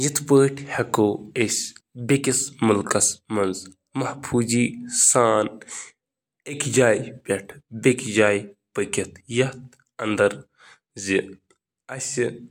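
Nothing in the recording stands out as a technical fault, so there's no problem to point to here.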